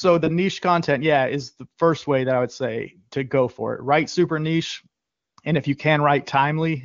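Right after "super niche", from about 5.01 to 5.37 s, you get AMR comfort noise: the phone decided nobody was talking and stopped sending speech frames for 360 ms, so the receiver filled the gap with a smooth, steady synthetic hiss until "and if you" comes back in.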